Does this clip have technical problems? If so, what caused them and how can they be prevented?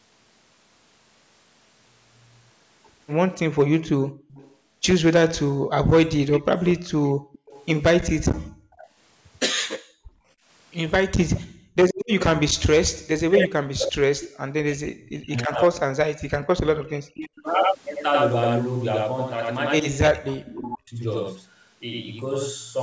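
Yes. There are four kinds of fault.

Channel delay (doubling) runs through the whole clip. One channel arrives 92.88 ms late, which fits a 4096-sample buffer. When the two channels are summed to mono, the late copy stands apart at full level. Every syllable gets a close slap echo right behind it. That makes the speech sound doubled and smeared. To prevent it, align both channels before any mono fold-down, or record from a single channel.

Echo leak appears from 3.82 to 7.66 s, from 11.35 to 12.26 s, and briefly from 20.02 to 20.10 s. A delayed copy of the speech returns at about 295 ms, 347 ms and 304 ms. It sits about 15 dB below the speech in the first stretch and about 10 dB below it in the later two. The likely cause is a loudspeaker at the far end. Its echo canceller let part of the played-back call through to the microphone, and that residue was sent back. To prevent it, the far end should use a headset or a better-tuned echo canceller.

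Background gated by the echo canceller occurs between 4.10 and 10.48 s. While the loudspeaker plays, the canceller clamps the microphone down hard. The room sound falls away by as much as about 36 dB and then comes back. These drops add up to about a second in total. The background seems to switch on and off. To prevent it, use gentler suppression, or add comfort noise so the floor stays steady.

Speech suppressed in double talk runs from 7.98 to 21.03 s. The speech dips and cuts out in pieces, sometimes by about 40 dB. Together these losses come to roughly seven seconds. This is likely the echo canceller failing when both sides talked at once. It could not tell the local talker from the loudspeaker echo, so it pushed both down. To prevent it, use an echo canceller with proper double-talk detection, or a headset that removes the echo path entirely.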